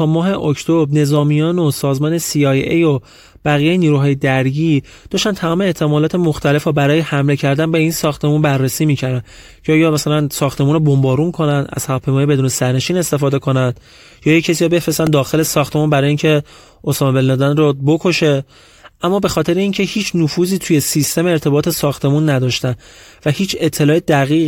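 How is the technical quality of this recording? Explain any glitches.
One glitch stands out, a repeated buffer at 15.07 s in the speech. New audio failed to reach the playback device in time, so it replayed the piece it already held. That piece is about 1.45 ms long, which fits a 64-sample buffer, and it plays two extra times with a hard join at each repeat. With a piece that short, the stutter collapses into a brief click or buzz rather than an audible echo, and it displaces a few milliseconds of the real audio.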